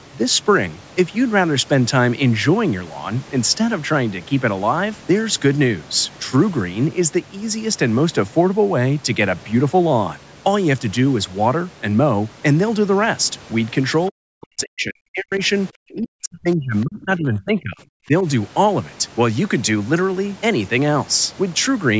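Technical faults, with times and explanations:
14.1–15.33 s and 15.78–18.25 s, speech suppressed in double talk: the talker drops by roughly 40 dB in fragments, likely because the echo canceller mistook overlapping far-end speech for echo. This differs from clean network dropouts.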